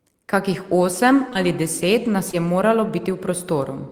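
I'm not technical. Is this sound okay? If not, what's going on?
No. There is short concealed packet loss at 1.29 to 1.37 seconds and again at 2.31 seconds. Tiny chunks of the speech arrived too late. The receiver patched each gap by stretching the sound around it, which leaves a brief smear or wobble.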